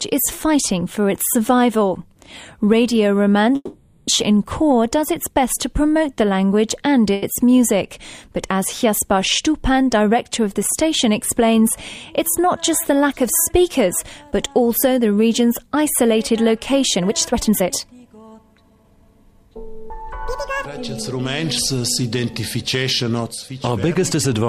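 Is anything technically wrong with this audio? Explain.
Yes, there are four kinds of fault.

From 3.55 to 4.10 s there is a call audio freeze. The last sound is carried on as a fading buzz for about 520 ms, ending in a brief 20 ms of near silence, before the audio resumes exactly where it left off. This was likely caused by delayed packets draining the jitter buffer. Because nothing is lost, a gap has been inserted rather than content cut. That continuation, rather than a clean dropout, marks it as a freeze instead of packet loss.

At 7.13 to 7.25 s there is a short stall from a late packet. One sound is held about 90 ms too long while the receiver waits for the missing packet, and then it carries on with nothing skipped. It is the same mechanism as the freeze but far shorter. It comes across as a small hitch, with no audible fade towards silence.

Two passages show a jitter buffer speed-up. 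From 12.61 to 13.69 s the audio runs about 7 percent fast, trimming roughly 70 ms. From 16.96 to 19.03 s it runs about 26 percent fast, removing around half a second. After delayed packets arrived together, the receiver cut out many short pitch-period pieces to bring the delay back down. The result sounds hurried but keeps its pitch, which separates it from a true speed change.

From 19.90 to 20.66 s there is a section at the wrong speed. Here the audio plays at 2.0 times its recorded rate, and the pitch rises along with it, by around ten semitones. The cause is likely playback against the wrong clock. Unlike the buffer speed-ups, speed and pitch jump together at the boundaries, so the passage turns both hurried and markedly high.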